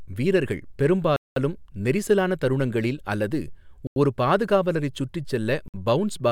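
A likely Bluetooth stall, where delayed packets let the headphone buffer run dry, cuts the speech to silence three times: 1.16 to 1.36 s (200 ms) before "நெரிசலான தருணங்களில் அல்லது ஒரு", 3.87 to 3.96 s (92 ms) between "நெரிசலான தருணங்களில் அல்லது" and "ஒரு பாதுகாவலரைச் சுற்றி", and 5.68 to 5.74 s (58 ms) after "அல்லது ஒரு பாதுகாவலரைச் சுற்றி".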